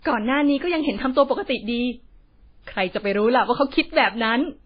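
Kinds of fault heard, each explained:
Transcoding between lossy codecs: The speech carries several layers of coding damage at once: the artefacts of different codecs heard together and a dull band-limited tone with nothing above 5 kHz, the lowest cut-off in the chain surviving. This fits a chain of MP3 at around 19 kbit/s, then AAC and WMA at 32 kbit/s, likely each re-encoding earlier artefacts. Unlike a single low-bitrate encode, these mismatched artefact types are stacked together.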